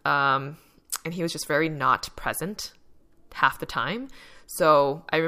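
Nothing stood out on listening to the speech in this recording.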